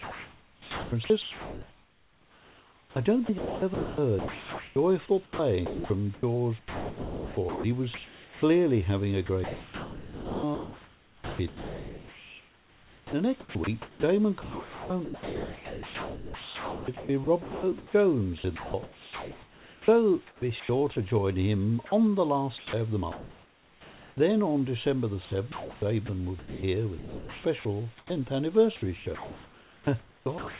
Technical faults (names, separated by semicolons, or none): sound chopped by the voice detector; sound dropped by the voice detector